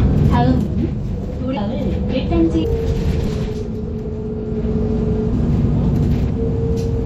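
A clip of everyday sounds with audible MP3 compression throughout. It sounds watery and swirly, with dulled treble, metallic chirps and smeared attacks. That is likely a low bitrate, near 64 kbps. Compressed frames are skipped at 0.59, 1.56, 2.63 and 3.26 s. The sound jumps ahead by about 0.4, 0.3, 0.7 and 0.3 s respectively. Each jump is a multiple of a roughly 26 ms frame. Overlapping frames turn each join into a short smeared blip, not a click.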